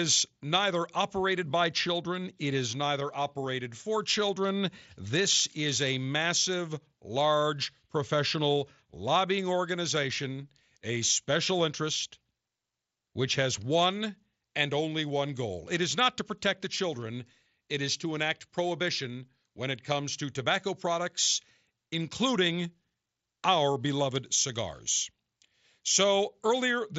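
There are no technical faults to describe in time order; the speech comes through the mSBC headset link as that codec normally carries it.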